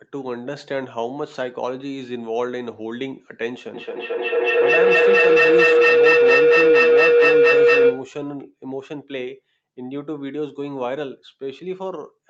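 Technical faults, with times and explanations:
3.74–8.21 s, feedback howl: a tone around 500 Hz swells to about 11 dB above the speech, with the loop repeating roughly every 200 ms. A microphone and loudspeaker on the same call feed each other, gaining level each trip until the loop's favoured frequency rings.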